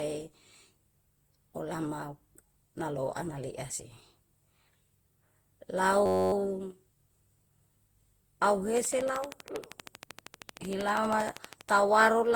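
Throughout, the speech sounds swirly, smeared and hollow, with blurred attacks. This is generation loss, likely from about fifteen rounds of lossy coding, consistent with repeated Opus at 64 kbit/s.

From 6.06 to 6.33 s, a system hang loop repeats one 10.67 ms piece about 25 times. This fits a 512-sample buffer cycling while the system froze. It sounds like a steady buzz at 93.8 Hz.

From 8.77 to 11.78 s, a train of clicks ticks over the speech. About forty similar pulses arrive regularly at 12.7 per second, peaking roughly 10 dB above the signal.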